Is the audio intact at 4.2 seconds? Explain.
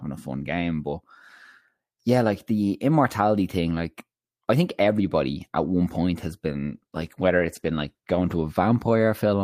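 Yes, the speech at 4.2 seconds plays through intact, with no audible fault at that moment.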